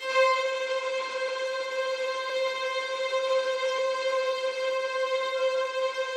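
Throughout the clip a watery, swirly quality and dulled treble point to MP3 compression, likely at a low bitrate near 64 kbps; a spectrogram shows a hard high-frequency ceiling and flickering holes.

At 1.27 s, 2.29 s and 3.78 s, compressed frames are skipped, jumping ahead roughly 200 ms, 150 ms and 70 ms. Each join is a brief smeared blip.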